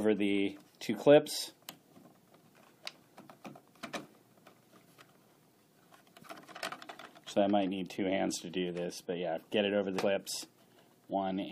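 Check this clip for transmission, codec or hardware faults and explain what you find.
One codec fault turns up. At 9.97 s there's damaged data in the compressed stream: the decoder hits corrupted bytes, loses frame sync, and spits out a brief glitch before recovering.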